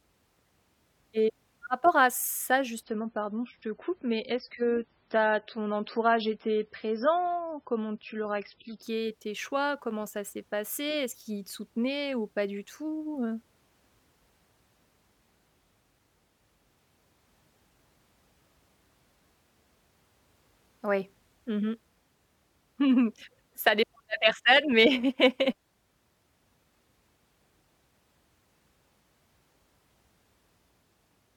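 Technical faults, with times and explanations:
2.83–8.83 s, adaptive stream at a lower bitrate: after "rapport à ça" the speech turns abruptly dull and swirly, with nothing above 5.6 kHz, and returns to full quality without a gap before "tes choix". This fits the player switching from a 128 kbit/s MP3 rendition to a 16 kbit/s one.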